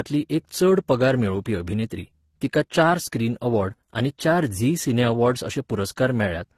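Transcoding between lossy codecs runs throughout the speech. Nothing remains above 14.1 kHz, and two kinds of coding artefacts overlap. This likely comes from a low-rate Opus encode, near 16 kbit/s, re-encoded as AAC-LC around 32 kbit/s, which spent bits reproducing the earlier artefacts.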